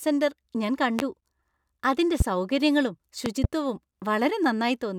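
Loud pops occur at 0.99–1.02 s and 2.20–2.23 s, with a double pop at 3.26–3.47 s just after "അതിന്റെ സൗകര്യങ്ങളും". Each sharp thump peaks about 15 dB above the speech, which carries on underneath. The pulses likely come from electrical transients such as a switch, plug or static discharge.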